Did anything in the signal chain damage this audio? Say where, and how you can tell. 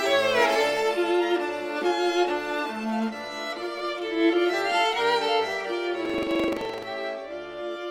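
Yes, buffer tearing in the driver/buffer stage, 6.02 to 6.86 s: a 23.4 Hz rattle, fitting a 2048-sample buffer. Waveform shows regular hard splices; spectrogram shows evenly spaced vertical streaks.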